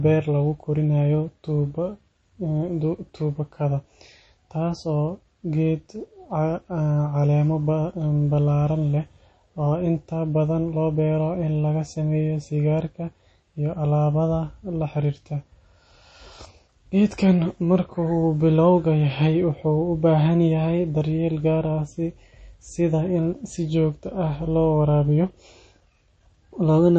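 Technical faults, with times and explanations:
Throughout, MP3 compression: the speech has nothing above about 8.4 kHz, a hard treble ceiling, and the remaining detail sounds plainly watery and swirly, with s sounds turning metallic and attacks smeared. This is likely an MP3 encoder starved of bits, which fits a low bitrate around 32 kbps. It drops weak frequency lines that flicker between frames. That flickering is what sets it apart from a simple low-pass filter, which would dull the sound without the swirl.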